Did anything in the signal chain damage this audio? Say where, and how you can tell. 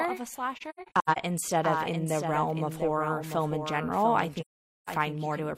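Yes. Throughout the clip, every sound is followed about 0.7 s later by a full-band copy roughly 5 dB quieter, with no decay or room colour. That is a doubled audio track, likely from a second, slower capture path or a misaligned edit. On a spectrogram each pattern repeats, fainter, at that fixed offset.

At the codec stage, AAC frame loss with muting appears twice. Between "of a slasher" and "instead of in the" (0.56 to 1.18 s), scattered gaps total 341 ms, with runs up to about a tenth of a second. From 4.40 to 4.89 s a solid 469 ms hole follows. The decoder zeroed the lost spectra, and the overlapping windows faded each gap in and out. On a spectrogram these show as blank full-band columns with tapered edges.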